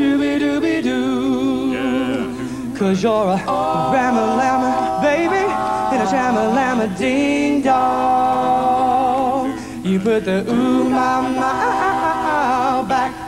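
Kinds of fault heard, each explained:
No kinds of fault are heard in this clip.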